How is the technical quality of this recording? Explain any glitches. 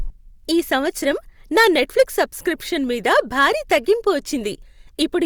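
The recording has two stretches of hard clipping. The level overran what the signal chain could pass, so peaks were sliced flat and the harmonics added by those flat tops give a harsh, crackly fuzz on the speech. The first runs from 1.57 to 2.22 s, about 6 dB over the limit, ending just before "సబ్స్క్రిప్షన్ మీద". The second, milder at about 4 dB, runs from 3.08 to 3.92 s, right after "సబ్స్క్రిప్షన్ మీద".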